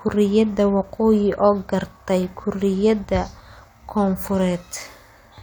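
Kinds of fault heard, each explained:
No faults turn up anywhere in this speech clip, so there's nothing to list here.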